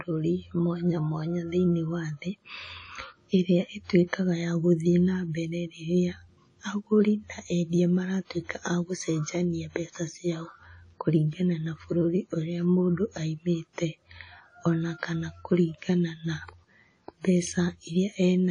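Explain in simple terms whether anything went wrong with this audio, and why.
Something did go wrong, and it lasts for the whole clip. The speech sounds washy and ringing, with a hiss that swells and fades along with the talking, and nothing is left above 10 kHz, so it lacks sparkle. This is most likely WMA compression squeezed too hard. A simple treble cut would only dull the sound, but here the smeared, breathing hiss shows the codec throwing away detail.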